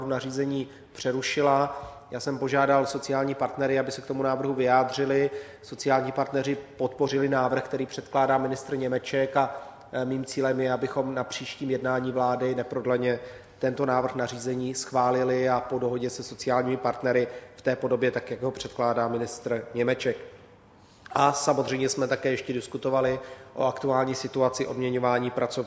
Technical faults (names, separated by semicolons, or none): none